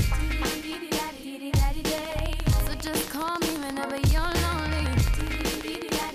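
From 1.98 s to 6.1 s, a train of clicks ticks at a steady 14.6 per second, some seventy in all, poking well above the sound, likely from interference by nearby equipment. The waveform shows evenly spaced spikes, and a spectrogram shows thin vertical stripes.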